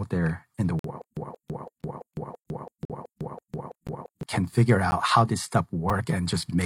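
At 0.79 to 0.85 s, right after "there in the", a gap between stream segments cuts a hole of about 50 ms into the speech. Further holes follow at 1.82 s, 2.85 to 2.90 s, 3.87 s, 4.91 s and 5.90 s, ranging from about 46 ms down to 5 ms. The timestamps of consecutive segments leave small spaces that the player fills with silence, so no speech is lost. Spaced about one second apart, the holes fit one-second segments. On a waveform each is a flat line with abrupt edges, and on a spectrogram a thin, clean vertical blank stripe.

From 1.02 to 4.23 s, between "there in the" and "can figure", there is a stutter with silent gaps. A 178 ms fragment plays nine times, each followed by 152 ms of digital silence, so it returns every 330 ms at a steady, mechanical pace. The likely cause is a stalled stream that replays its last buffered fragment on each retry and then runs dry, losing the speech that should have filled those three seconds. 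A waveform shows identical blocks separated by dead flat stretches, and a spectrogram shows the same pattern stamped repeatedly with empty columns between.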